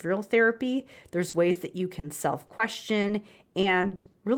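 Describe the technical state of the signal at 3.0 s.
Two bursts of short concealed packet loss sit right after 3.0 s, from 3.01 to 3.05 s and again from 3.07 to 3.11 s. In each, roughly 20 ms of speech arrived too late for the decoder, and the receiver bridged the gap by extending the preceding sound before crossfading back. It is heard as a quick double smear or flutter. On a spectrogram, each patch looks briefly smeared.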